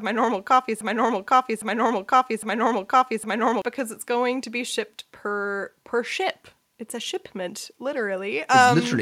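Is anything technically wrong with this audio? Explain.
Yes. From 0.81 to 3.62 s there is a broken-record loop, likely caused by the playback or stream stalling and resending its last buffered piece. After "my normal coffee", a 0.81 s fragment repeats exactly three times back to back, replacing the speech that should have played, before "because it's going to" resumes.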